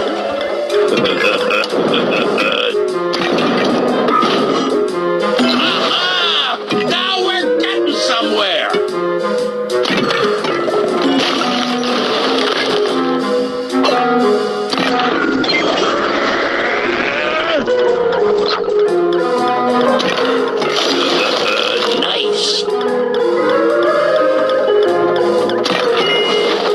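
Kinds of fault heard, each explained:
Call bitrate drop: a falling bandwidth estimate starved the encoder of bits, so for about 4 seconds the audio turns coarse and loses everything above 8 kHz.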